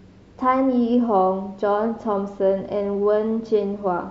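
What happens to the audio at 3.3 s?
Nothing goes wrong at 3.3 s; the speech carries on intact through that moment.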